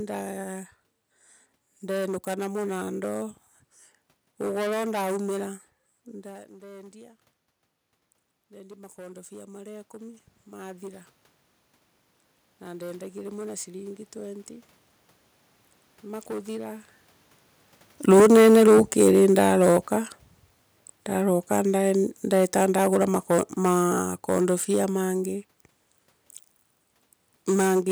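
From the start and through the whole clip, hard clipping flattens the peaks of the speech. The signal is driven about 14 dB past what the chain can pass, and a few percent of samples are cut square. The result is a harsh fuzz on every loud syllable, not a soft limiter's gentle squeeze, because the flat tops throw harmonics high into the spectrum.

At 6.03 s, right after "ugoro nduumira", the talker moves away and the input drops by about 19 dB. Automatic gain rising follows: the control lifts its gain by about 15 dB over the next twelve seconds, until 18.48 s. The slow swell gives it away. The room noise climbs together with the voice, which a talker simply leaning in would not cause.

Near 17.5 s the talker comes closer again. From 17.94 s to 25.13 s automatic gain falling pulls the level down by about 9 dB. The speech arrives loud and crushed by the clipping, then sinks gradually with its background. 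A change at the microphone would leave the background steady.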